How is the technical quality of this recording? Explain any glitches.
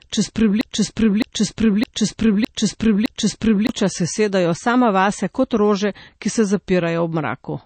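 The recording has two clear technical problems: a stuck, repeating section at the start, and a dull, band-limited tone throughout.

Broken-record loop, from 0.00 s to 3.69 s: the clip opens already mid-loop, with a fragment of about 0.61 s repeating exactly, back to back, five times. This is likely a stall in the player, encoder or stream, which kept resending the last piece of audio it held. The speech that should have filled those seconds is missing, and the result is a rhythmic, stuttering repetition until normal playback resumes.

Low-bitrate audio saved at a high bitrate, across the whole clip: the speech stops sharply at about 8.4 kHz and carries the smeared, swirly texture of heavy MP3 compression. This points to a very low-bitrate MP3, around 32 kbit/s, that was likely re-encoded at a much higher rate, around 256 kbit/s. The second encoding makes the file larger but cannot restore the detail the first one discarded, so the missing treble and the artefacts remain.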